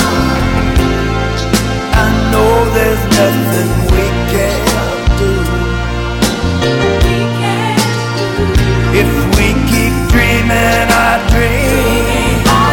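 Hard clipping runs through the whole clip. The signal is driven about 10 dB past what one stage can pass. A few percent of samples hit the ceiling and are cut flat. Those flat tops add high harmonics, heard as a harsh fuzz on every loud sound.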